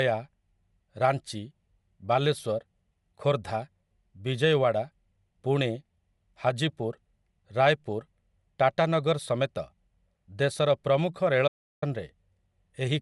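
Right from the start the speech has a grainy, breathy edge, and nothing comes through above 11.5 kHz, so the top end just stops. That points to Bluetooth LC3 compression, likely at a moderate rate around 48 kbps, with the codec thinning and noise-filling the upper band.

Then at 11.48 s, right after "ଦେଶର ପ୍ରମୁଖ", there's an audio dropout to silence lasting about 0.34 s, until 11.82 s. It's silent with no room tone at all, likely from the input link dropping briefly, and whatever was said there is lost.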